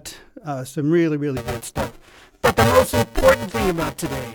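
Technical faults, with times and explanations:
1.37 to 4.34 s, buffer tearing: writer and hardware reader cross each period, splicing in slightly older audio, causing a 345 Hz robotic buzz that fits a 128-sample buffer.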